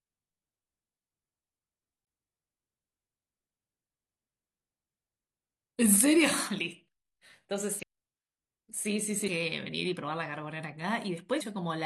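Damaged data in a compressed stream causes brief blips at 2.03 s, 7.79 to 7.83 s, 9.24 to 9.28 s, and 11.37 to 11.42 s. Corrupted bytes make the decoder misread frames. It loses sync and hunts for the next frame header.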